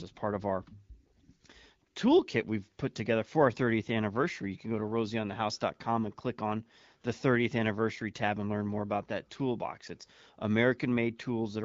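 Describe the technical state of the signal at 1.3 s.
At 1.3 s the speech is intact, carried cleanly through the AMR wideband (HD Voice) codec at 12.65 kbit/s with no fault at that moment.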